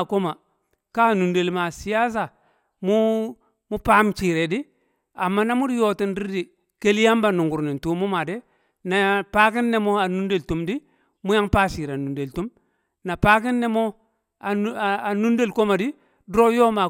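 No faults detected anywhere in this speech recording.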